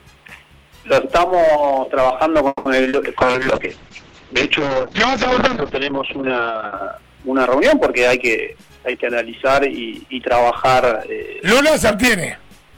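At 2.47 s the sound stalls for about 0.2 s, a fading continuation then a brief silence, likely a call audio freeze from delayed packets; nothing's lost, just a gap inserted. Right after, two short concealed packet losses at 2.83 s and 2.89 s (20 and 40 ms) get patched by extending the last sound, giving quick smears or wobbles. From 3.19 s to 6.81 s there's a call bitrate drop: the top end is cut to 8 kHz and the sound turns rough and muffled, which fits the encoder falling from 128 kbps to around 7 kbps. Then between 8.53 s and 10.41 s a jitter buffer speed-up trims pitch-period chunks, roughly 150 ms in total, so the audio runs about 7% fast at unchanged pitch and feels hurried.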